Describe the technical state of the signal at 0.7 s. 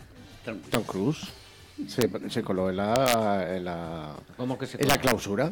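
An integer overflow occurs at about 0.74 s: a sum or gain pushed roughly 2 dB past the largest value the integer format can hold, and instead of being held at that ceiling it wrapped around to the opposite extreme. The peak that should have been flattened therefore jumps across the entire range in one step, producing a violent crack far harsher and more abrupt than ordinary clipping would give on the same loud moment.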